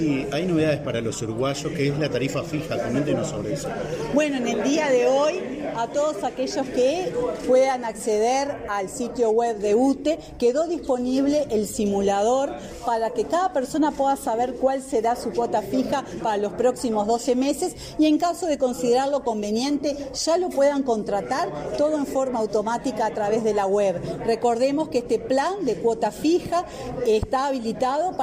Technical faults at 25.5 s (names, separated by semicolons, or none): none